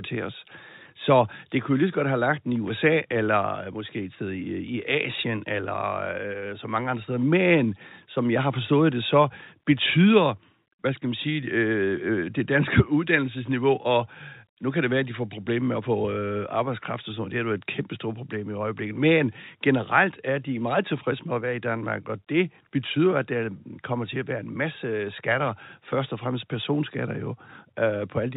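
Nothing stood out on listening to this telephone-band speech recording.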